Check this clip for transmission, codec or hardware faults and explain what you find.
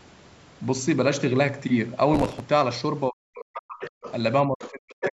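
Three kinds of fault can be heard in this speech clip: a crackle burst, dips in the talker's level, and a second voice leaking in.

Processor overload crackle runs from 2.14 to 2.40 s. Audio buffers of roughly 5 ms missed their deadlines, around twenty of them. Each gap was filled with stale audio with hard edges. The result is a gritty tearing over the speech that stops once the load clears.

Speech suppressed in double talk occurs from 3.09 to 3.83 s and again from 4.47 to 5.16 s. The talker's level dips hard, by up to about 40 dB. The likely cause is an echo canceller that could not separate the talker from loudspeaker echo and turned both down.

The other side's voice leaking through appears from 3.80 to 4.12 s, 4.60 to 4.69 s, and 5.01 to 5.11 s. A second voice sits about 15 dB, 20 dB and 5 dB below the speech in those spans. It likely comes from loudspeaker playback that the echo canceller left partly in the microphone signal.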